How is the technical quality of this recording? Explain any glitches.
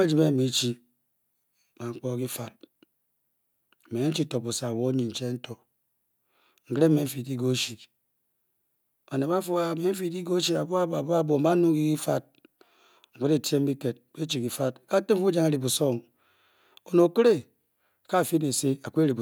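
No glitches here: the recording holds steady, with nothing audible pointing to a fault anywhere in the chain.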